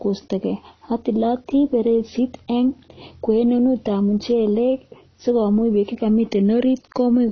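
From start to finish the speech is band-limited, with nothing above 6.6 kHz, so it sounds dull and lacks air, and coding damage is plainly audible throughout. The likely cause is AAC compression, AAC-LC at a low bitrate consistent with about 24 kbps. At that rate the encoder cannot spend bits on the upper spectrum. It discards everything above the cut-off and quantises the remaining frequency lines coarsely against its hearing model, leaving the speech audibly degraded across the whole clip.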